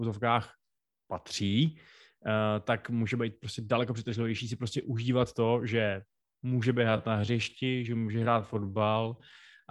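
A time-stretched section runs from 6.71 s to the end of this speech, just after "užívat to že může". The pace abruptly drops to 0.694 times normal while pitch stays put, so the speech drags, likely from software lengthening the audio by repeating short pieces.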